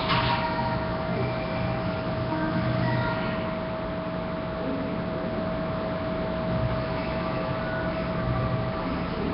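Sounds here, smeared and hissy throughout, with nothing above 5.3 kHz; that rough, underwater texture is likely Nellymoser compression at a low bitrate.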